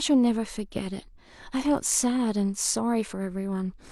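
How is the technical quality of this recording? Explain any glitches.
No technical glitches can be heard anywhere in this speech recording. There is nothing here that needs explaining.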